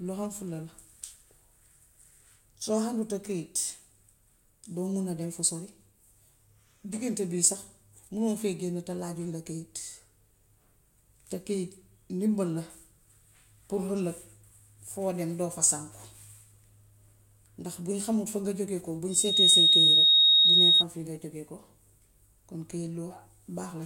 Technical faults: loudspeaker feedback squeal

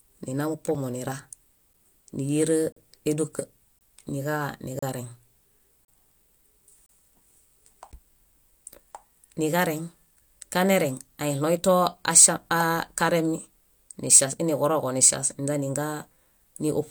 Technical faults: gap between stream segments

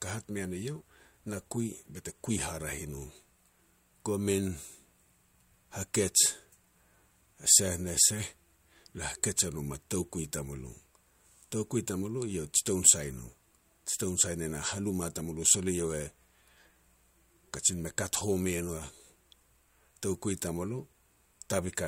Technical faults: none

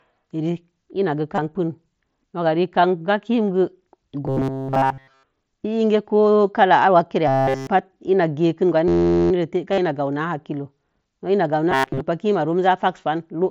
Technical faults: concealed Bluetooth headset packet loss; robotic sound from repeated short buffers; system hang loop

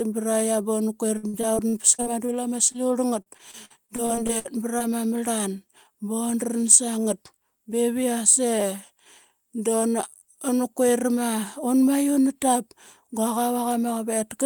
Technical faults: repeated packet loss (robotic sound); short concealed packet loss

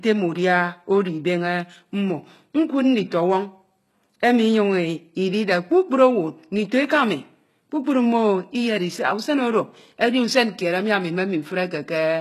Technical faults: HE-AAC compression

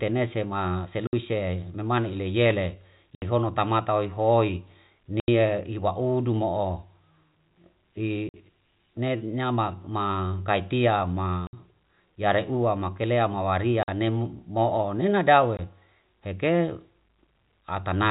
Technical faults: packet loss filled with silence; loud pop

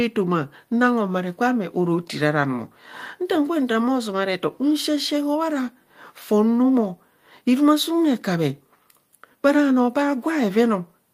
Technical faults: none

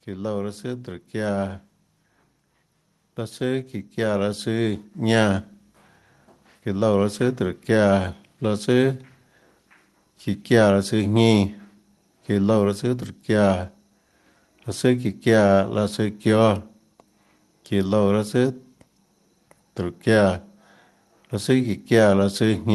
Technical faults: automatic gain rising

